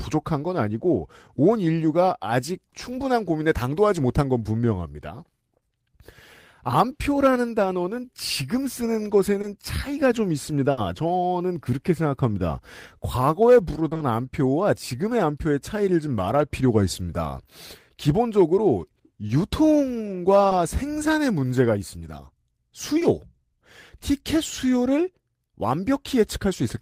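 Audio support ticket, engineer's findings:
Short concealed packet loss at 9.41, 13.89–14.01 (three back-to-back), 19.27, 20.49 and 22.99 s: brief smears where the jitter buffer/decoder extrapolated the last sound, visible as smoothed spectrogram slivers.

Burst of packet loss at 10.71–10.79 s: about 60 ms lost, concealed by continuing the last sound and fading it out. The waveform shows a fading plateau, and the speech resumes further on.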